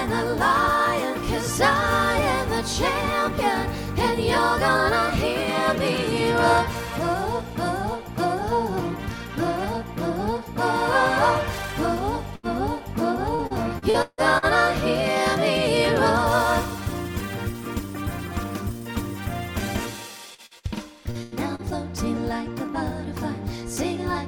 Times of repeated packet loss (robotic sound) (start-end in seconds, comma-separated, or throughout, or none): 13.35-14.45